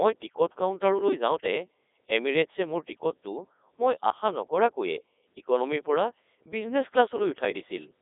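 Throughout the speech, the Codec 2 vocoder is audible: the voice is rebuilt from pitch, voicing and a spectral envelope rather than its waveform, so it sounds robotic and buzzy. It runs in its highest 3.2 kbit/s mode, with heavy damage, a 300 Hz to 3.7 kHz band and nothing above 3.8 kHz.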